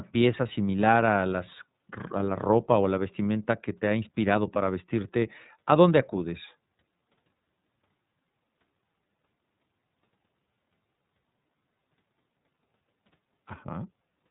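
From start to finish the speech carries iLBC codec damage, plainly audible. Nothing passes above about 3.8 kHz, so sibilants lose their edge. Each frame, which fits a 30 ms frame at 13.33 kbps, has its excitation coded on its own, giving the sound a slightly rough, synthetic texture.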